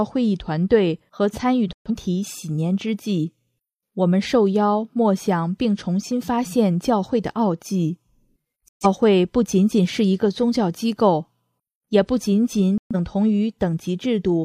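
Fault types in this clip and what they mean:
Digital broadcast dropout: the receiver lost lock on the digital stream or rejected frames that failed their error check, so it muted until clean frames arrived again. Here that happens three times, at 1.73 to 1.91 s, 8.68 to 8.87 s and 12.78 to 12.95 s, each a brief hole of about 0.18 s in which the sound cuts out. About 128 ms of programme is missing at each one, which fits three lost frames.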